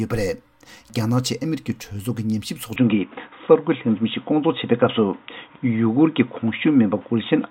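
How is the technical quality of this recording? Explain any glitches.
The recording has one fault, starting at 2.76 s and lasting to the end. An input switched to a poorer device is the likely cause. Nothing passes above 3.8 kHz, so the sound turns dull and boxy. Its level shifts by about 5 dB, a new faint background noise appears well below the signal, and there is no gap at the changeover.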